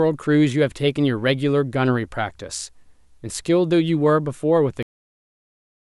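A speech recording with a cut-off end: at 4.83 s the audio stops abruptly mid-sound and drops straight to digital silence, with no natural decay. The final buffers were never written out, so the remaining second is empty.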